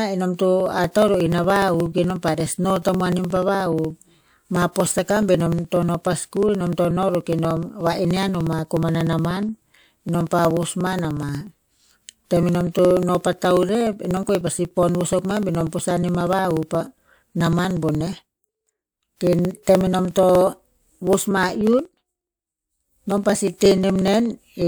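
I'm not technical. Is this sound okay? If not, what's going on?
No. From 0.60 s to 24.62 s there are periodic USB or driver dropouts: every 0.06 s the computer briefly stalls, skipping a few milliseconds of speech and causing steady ticking.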